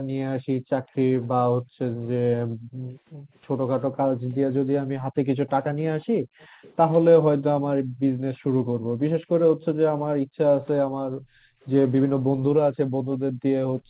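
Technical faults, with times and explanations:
0.0–6.62 s, background gated by the echo canceller: while the loudspeaker played, the canceller pulled the microphone down by as much as about 40 dB, so the room sound dips or vanishes for roughly three seconds in total, returning whenever the canceller releases.
0.84–1.27 s, echo leak: a faint delayed copy of the speech, about 35 dB below it, trails the original by 377 ms. This is likely residual loudspeaker sound the echo canceller failed to remove, sent back down the call.
5.48–6.76 s, echo leak: a longer stretch of the same delayed copy, now about 30 dB down and lagging by 379 ms.
7.84–13.89 s, background gated by the echo canceller: the same hard ducking resumes for the rest of the clip, with the background falling by up to about 40 dB while the loudspeaker is active and coming back between bursts.
9.6 s and 11.62 s, echo leak: two brief scraps of delayed speech, at 381 and 382 ms lag, about 25 dB and 40 dB below the speech respectively, short enough to register as scraps rather than a continuous echo.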